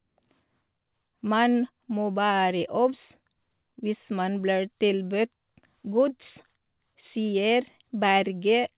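Nothing goes wrong anywhere in this speech clip; what you hear is simply the ordinary narrowband character of a G.711 mu-law call path at 64 kbps, with nothing above 4 kHz.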